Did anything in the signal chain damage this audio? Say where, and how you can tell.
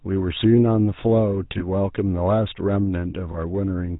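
Yes. The damage is at the codec stage: the whole clip has been through the GSM full-rate codec, and its rough, buzzy quality fits the 13 kbit/s full-rate mode. That codec models the vocal tract and drives it with a sparse, regularly spaced pulse excitation, decimated to every third sample, so the speech gains a gravelly edge. On a spectrogram, energy stops sharply at 4 kHz throughout, and the harmonics look coarse and striated rather than clean.

The network stage adds lost GSM frames at 1.58 to 1.62 s and 3.32 to 3.37 s. Each gap fits a single lost 20 ms frame, which the decoder concealed by repeating the last good frame's settings. You hear a brief metallic ring where the speech should move on. On a spectrogram, each spot shows a short, frozen copy of the preceding spectrum. The waveform shows a small repeated segment there.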